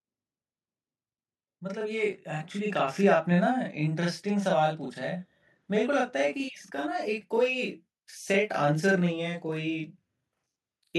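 Throughout the speech, a channel delay of 40 ms produces audible doubling: one channel arrives late, and the summed mono signal carries a second copy at equal level. From 1.6 to 3.04 s, automatic gain rising lifts the level by about 5 dB as the control reacts to quiet input, swelling voice and background together.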